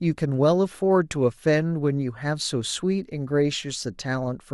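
No technical faults can be heard anywhere in this speech recording. Nothing in the audio points to a dropout, glitch or distortion at any point.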